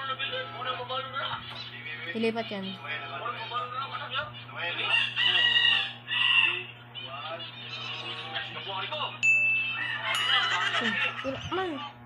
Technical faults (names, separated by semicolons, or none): none